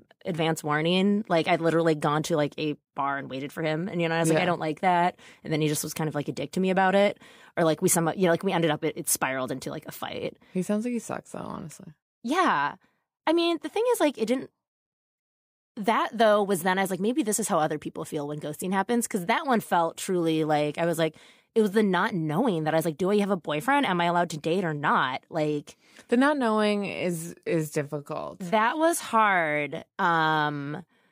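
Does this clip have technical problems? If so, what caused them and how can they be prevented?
Yes. From 26.45 s, just after "the not", to the end at 31.11 s, the speech abruptly slows to 0.73 times its pace while the pitch stays put, so it drags. This is likely a time-stretched section, where software lengthened the audio by repeating short pieces of it. To prevent it, trim or re-edit the material to fit the required length instead of stretching it.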